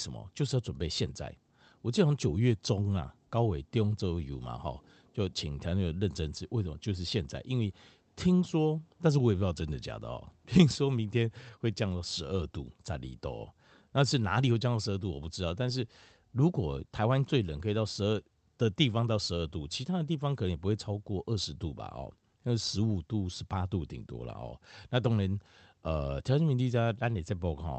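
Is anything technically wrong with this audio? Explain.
No, nothing is technically wrong with this speech; it has been through a call codec path whose audio bandwidth tops out around 8 kHz, which is the expected behaviour of that path rather than a fault.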